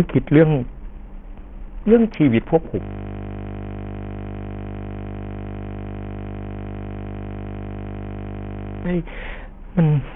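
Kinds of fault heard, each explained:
Bluetooth SBC compression: The whole speech clip sounds squeezed through a low-rate Bluetooth link, likely SBC at a setting that fits about 48 kbps. At that rate the upper sub-bands are starved of bits. The treble thins out and flickers in and out. What remains is coarsely quantised, so a gritty grain and some aliasing hang on the sound. The damage is heavy and runs from start to finish.
system hang loop: From 2.81 s to 8.85 s the audio stops moving forward. A single 20 ms slice repeats over and over, about 300 times. This happens when the system freezes but the sound hardware keeps replaying the same buffer. Because the slice is so short, it is not heard as a stutter. It becomes a steady buzz at 50 Hz, lasting about six seconds before normal playback returns.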